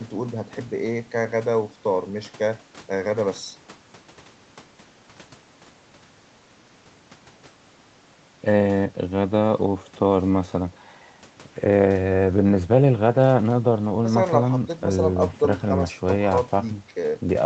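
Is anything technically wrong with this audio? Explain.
No, the speech shows no technical fault, and its top end stops at 8 kHz, as expected for audio carried over a wideband call path.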